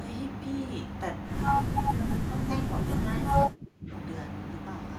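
From 1.7 to 3.05 s the speech dips by around 10 dB in patches, then from 3.46 to 3.91 s it drops far deeper, nearly cutting out. This is speech suppressed in double talk, likely an echo canceller turning the talker down while the far side spoke.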